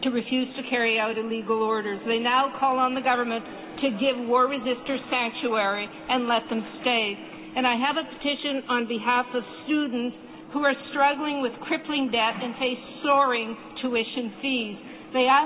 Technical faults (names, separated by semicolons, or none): none